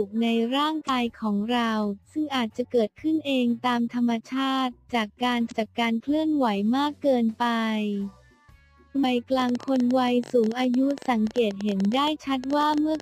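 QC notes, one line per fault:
0.85–0.89 s, 5.47–5.52 s, 9.00–9.05 s: damaged data in a compressed stream. Three brief glitches, each about 45 ms. Corrupted bytes make the decoder misread frames, lose sync and hunt for the next frame header, so a short glitch replaces the audio. A spectrogram shows a narrow vertical smear of broadband or oddly banded energy. The waveform shows a small jagged discontinuity where the audio doesn't line up.
9.40–13.01 s: train of clicks. About 50 sharp ticks at roughly 13 per second with uneven spacing, running to the end and audible across pauses. They peak around 5 dB above the surrounding signal. The clicks share a similar shape, which likely points to interference from nearby equipment or a faulty connection or power supply. A spectrogram shows thin full-height vertical lines at irregular intervals. The waveform shows repeated narrow spikes standing above the audio.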